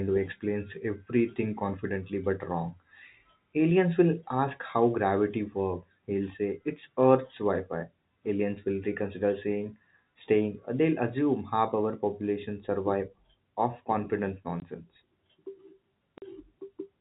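Speech over a telephone-band G.711 link suffers packet loss filled with silence: the receiver substitutes dead air, producing hard-edged gaps at 14.60–14.62 s (20 ms) and 16.18–16.22 s (40 ms), consistent with one and two lost packets.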